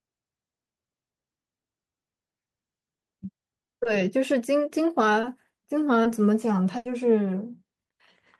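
There are three short concealed packet losses, at 3.83–3.87, 5.21–5.25 and 6.03–6.07 s. Each time about 20 ms never arrived and got patched by stretching the previous sound, leaving a quick smear or wobble. Then at 6.77–6.87 s there's a burst of packet loss. About 80 ms went missing, so the last sound is held and fades out as a buzz or hiss, and the audio jumps ahead.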